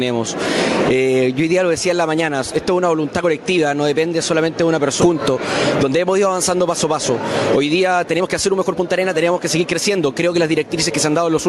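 Gain pumping runs through the whole clip. The level swings by roughly 10 dB. The likely cause is gain set far too high, with a fast limiter pulling it down each time.

At 5.01 to 5.03 s there is a skip ahead. About a second of audio is simply gone. Nothing fills the gap. Playback jumps forward, and the sound on either side is joined almost directly.

A jitter buffer speed-up follows from 6.59 to 7.13 s, at 106% speed. Roughly 40 ms is trimmed out in small pitch-period pieces. A stronger one runs from 7.58 to 10.91 s at 113%, removing around 400 ms. Pitch holds, but the sound feels rushed.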